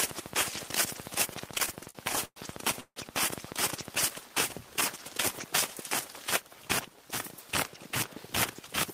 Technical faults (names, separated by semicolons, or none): train of clicks; repeated stalls (stutter); call audio freeze